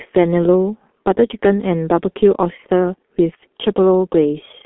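Throughout, G.723.1 codec damage muffles and roughens the speech, fitting a 6.3 kbit/s stream; a spectrogram shows energy confined to roughly 200 Hz–3.4 kHz, blank above 3.8 kHz.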